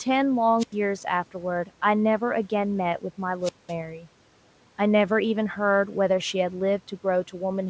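At 0.58 to 0.75 s and again at 3.41 to 3.74 s there's a wireless microphone squelch dropout: the radio signal fades, hiss swells briefly, then the receiver mutes, leaving holes of about 90 ms and 200 ms before the speech comes back.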